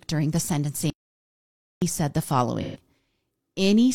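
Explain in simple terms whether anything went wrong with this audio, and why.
Yes, two things went wrong in this speech.

The first is an audio dropout to silence. From 0.9 to 1.82 seconds, the sound stops dead. For almost a full second there is nothing at all, not even the faint hiss of the room. Then the speech comes back mid-flow. The likely cause is that the input was cut off, perhaps a loose connection or a brief mute, while recording carried on. Whatever was said in that gap is lost.

The second is AAC frame loss with concealment. Around 2.61 to 2.80 seconds, the speech turns briefly smeared, noisy and hollow. Some small chunks of the compressed audio went missing, about 128 milliseconds' worth, which fits roughly three lost blocks. The player covered the hole by guessing from the sound just before it. The guess keeps the flow going, but it blurs the detail.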